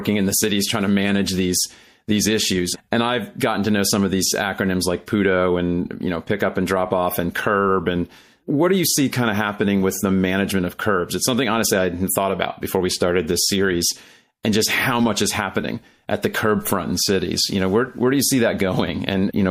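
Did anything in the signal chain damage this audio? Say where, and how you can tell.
Yes. The damage sits at the codec stage, and it runs through the whole speech clip. The damage is plainly audible. The s sounds come out metallic and chirpy. Quiet detail has a watery, swirling quality as it drops in and out. Consonant attacks are smeared. This is likely MP3 compression. Short of bits, the encoder zeroed weaker frequency lines frame by frame. The damage fits a 64 kbps encode.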